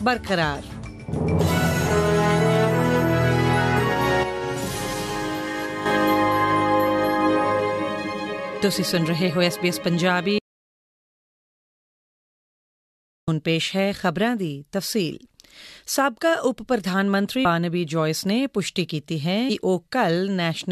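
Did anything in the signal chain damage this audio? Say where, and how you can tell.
Yes. From 4.23 s to 5.86 s the level steps down by about 7 dB and steps back up at the end, with no fade either way. The background noise drops and returns along with the wanted sound, so the change happened inside the digital chain. This sudden gain jump is likely a gain setting or bit shift in the driver or sample-format stage, applied instantly between two samples with no ramp.

From 10.39 s to 13.28 s the sound cuts off mid-flow and the gap is dead digital silence, with no room tone or noise floor. About 2.89 s of audio is simply missing, and the sound resumes abruptly. That points to an audio dropout to silence, likely at the capture or driver stage. The input stopped arriving while the recorder kept writing silence.

At 17.44 s the audio jumps forward by roughly a tenth of a second. The join is a short smeared blip, not a sharp click. 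That is compressed frames skipped at the codec or storage stage. The missing stretch fits about five frames of 23.2 ms each, dropped as lost or rejected. Because neighbouring frames overlap, the decoder's output blurs across the seam instead of breaking cleanly.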